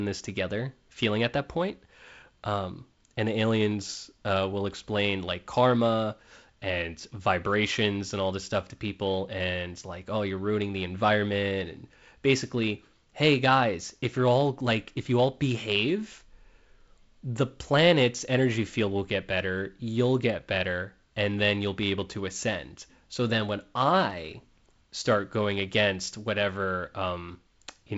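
Nothing to flag in this speech recording: it comes through G.722 wideband telephone coding at 48 kbit/s, with the top end stopping around 7.7 kHz as that coding does, and there are no technical faults to point to.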